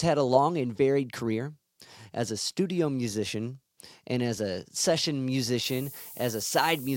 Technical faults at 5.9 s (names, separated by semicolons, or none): low bit depth with noise shaping